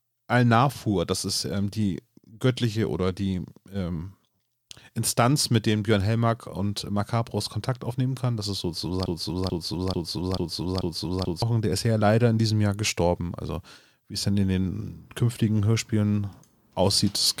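A likely playback or stream stall kept resending one 0.44 s fragment, a broken-record loop from 9.06 to 11.42 s repeating five times before "der ist ja leider".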